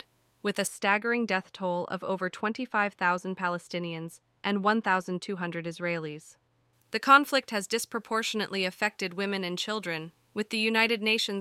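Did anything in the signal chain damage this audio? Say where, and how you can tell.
Yes. Right after "with a", from 0.67 to 6.73 s, de-emphasis was applied wrongly at the converter stage. A treble-cut filter ran on speech that had no pre-emphasis, or ran twice, so the sound turns dull, about 14 dB down at 10 kHz relative to 1 kHz. A spectrogram shows the upper bands fading smoothly during that span.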